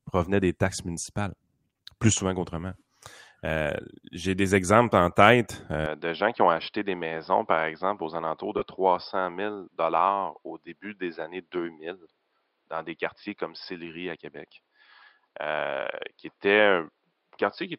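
Speech in which the recording input was likely switched to a poorer device at 5.86 s, right after "des exemples en tête". From there to the end, nothing above 5.2 kHz survives, so the sound turns duller and boxier, with no gap at the switch, little change in level, and a new noise floor far below the speech. At 8.58 to 8.62 s, lost LE Audio frames left a gap of about 37.5 ms, which fits five 7.5 ms LC3 frames. The decoder refilled it by repeating the last spectrum with randomized phases, so the sound briefly smears into a noisy blur instead of dropping out.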